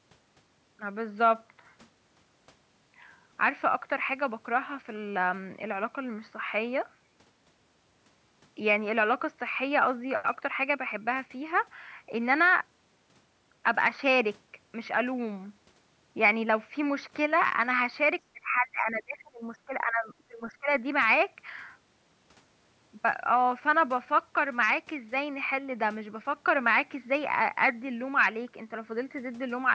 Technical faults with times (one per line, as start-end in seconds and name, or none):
18.33-20.70 speech suppressed in double talk